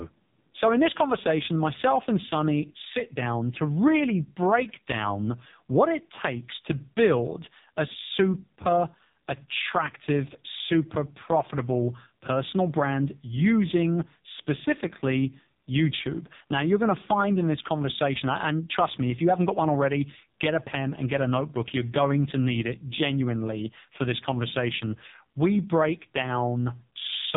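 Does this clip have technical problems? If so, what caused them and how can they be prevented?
Yes. AMR narrowband mobile codec damage runs throughout: nothing above 3.8 kHz survives, and the heavily buzzy, synthetic speech points to a very low bitrate around 5 kbps. A vocal-tract model driven by sparse pulses in each frame rebuilds speech only crudely. Prevent it by recording or transmitting over a wideband or higher-bitrate path instead of a narrowband mobile call.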